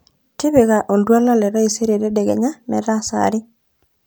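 A drift correction step runs from 0.90 to 2.29 s: the speech abruptly slows by about 5.4% and drops roughly a semitone (96 cents), then snaps back. This likely comes from clock-matching software briefly shifting playback rate to rebalance its buffer.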